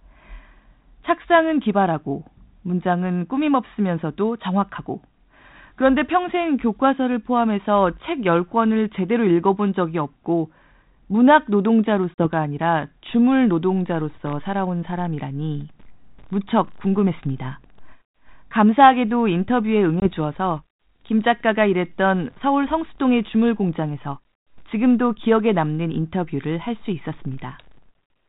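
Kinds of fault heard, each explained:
Packet loss on an ADPCM call: The speech travels over G.726 ADPCM at 32 kbit/s, and audio goes missing twice and is replaced by hard-edged silence. At 12.14 s a 40 ms dropout, roughly two packets' worth, falls within a disturbance lasting to 12.28 s. At 20.00 s a 20 ms dropout, about one packet, sits within a disturbance ending at 20.08 s. In both, the decoder's adaptive predictor and step size lose step with the sender's, which disturbs the resumed audio.
Loose connector crackle: A short, irregular burst of crackle runs from 14.26 to 14.33 s, lasting roughly 60 ms. It comes from a worn or dirty contact that makes and breaks rapidly as it shifts. Each break chops the signal, and any DC present on the line adds pops at the edges. The result is a scratchy burst laid over the speech, separate from the codec's steady character.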